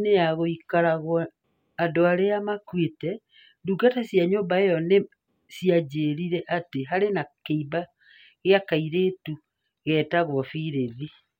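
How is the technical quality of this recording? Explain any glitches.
No technical glitches can be heard anywhere in this speech recording. There is nothing in it that calls for an explanation.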